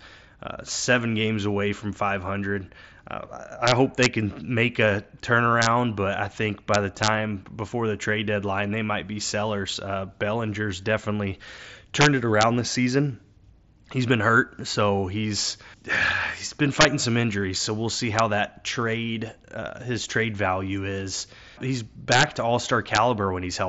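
A speech recording, passed through the mSBC wideband headset codec with its light graininess, suffers integer overflow: loud peaks exceeded the largest integer value and wrapped to the opposite sign instead of being limited, so they snap into harsh cracks far sharper than clipping, at 3.68–4.06 s (ending before "can make a"), 5.62–5.66 s, 6.74–7.08 s, 12.01–12.43 s (before "this season"), 16.81–16.85 s, 18.19 s, 22.12–22.23 s and 22.95–22.98 s, overshooting by up to about 5 dB. Concealed Bluetooth headset packet loss also occurs at 9.41 s, after "deadline they might be". The receiver filled the gap by repeating the best-matching recent waveform, which fits a single lost packet of about 7.5 ms, so it is almost hidden.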